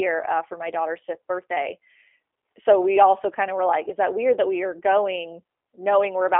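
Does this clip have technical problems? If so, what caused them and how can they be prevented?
Yes. The G.729 codec runs throughout: sound is confined to about 300 Hz to 3.4 kHz, and the speech has a rough, buzzy, synthetic grain that fits an 8 kbit/s stream rebuilt from a vocal-tract filter, pitch predictor and sparse pulses. That grain is what separates it from simple telephone-band filtering. To prevent it, use a wideband codec such as G.722 or Opus at a higher bitrate.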